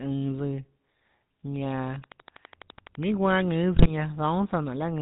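The whole clip carries the GSM full-rate codec sound: nothing above 4 kHz, and a buzzy, gravelly roughness from the pulse-driven excitation replacing the real voice source. The damage is plainly audible and fits a 13 kbps GSM full-rate stream.

From 1.80 s to 3.04 s a train of clicks ticks over the speech at a regular 12 per second, roughly fifteen in all, peaking about 10 dB above the signal. The cause is likely interference from nearby equipment or a faulty connection.

Between 3.74 s and 3.91 s, GSM bit errors break the speech into squawks, pops and gargling. Corrupted filter, pitch and gain values bent the spectrum and level frame by frame. This points to seven damaged frames at a bit error rate of about 5%.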